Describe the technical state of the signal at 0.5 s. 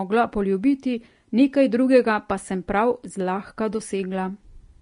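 Vorbis compression damage is present at 0.5 s, as it is across the entire clip. The speech carries nothing above 10.6 kHz, and the treble just below that line sounds hissy and grainy. This is likely the work of a Vorbis encoder at low quality, and the plainly audible damage fits a bitrate around 34 kbps. The encoder drew a smooth spectral envelope, cut the top band, and quantised the remaining high detail so coarsely that it turned into noise of similar energy, roughening the tone and softening onsets.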